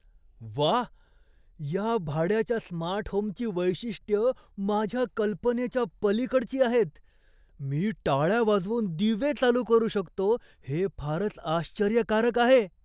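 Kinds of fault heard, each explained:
No kinds of fault are heard in this speech.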